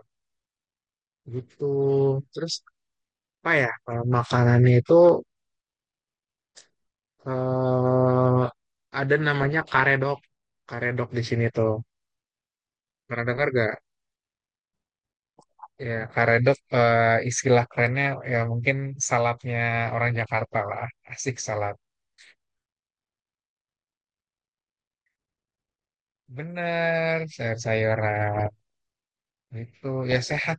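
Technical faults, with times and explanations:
Throughout: MP2 compression. The speech sounds dull, with gurgling, granular distortion. Upper sub-bands drop out, likely from MPEG Layer II coding at roughly 80 kbps.
9.30–9.97 s, 20.06–20.57 s, 28.36–28.46 s, 30.11–30.39 s: DAB burbling. Short blips of noise appear. Reception bit errors get past the error correction into the audio data, and the wrong samples put noise into single sub-bands.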